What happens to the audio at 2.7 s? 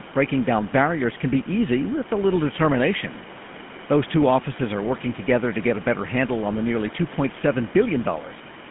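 At 2.7 s the speech carries the GSM full-rate codec's damage, present for the whole clip rather than starting there. The codec rebuilds the voice from a vocal-tract model fed by sparse regular pulses, giving a plainly audible buzzy, gravelly roughness, with nothing above 3.7 kHz and a line band of roughly 150 Hz to 3.4 kHz. The room noise underneath sits about 18 dB below the speech.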